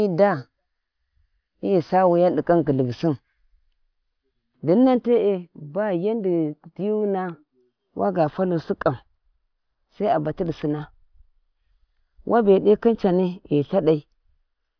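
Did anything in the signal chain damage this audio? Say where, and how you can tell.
No. Nothing in the chain audibly damaged this speech.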